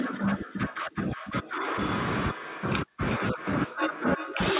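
From start to end, the speech is followed by a quieter second copy arriving roughly 0.4 s behind it, sitting about 13 dB below the direct sound. This is echo with no canceller: the far end's loudspeaker output is picked up by its microphone and sent straight back, with nothing subtracting it. The returned copy sounds thin, and the whole telephone-grade call path is narrow, with nothing above 4 kHz.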